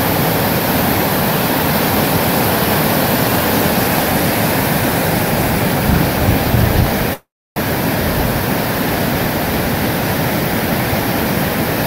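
A call audio freeze runs from 7.13 s to 7.58 s. The last sound before it is stretched into a fading buzz or hiss that gives way to about 0.29 s of silence, and then the audio picks up exactly where it stopped. Nothing is skipped, but everything afterwards arrives about 0.43 s late. This likely comes from packets stalling in transit so the jitter buffer ran dry, leaving the receiver to fill the wait with an extension of what it last had.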